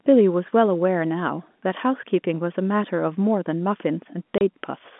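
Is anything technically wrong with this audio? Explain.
Yes. From 4.38 to 4.41 s, packet loss filled with silence: the receiver played a 30 ms gap of silence in place of missing audio, which fits a single lost packet. The speech drops out abruptly, with hard edges.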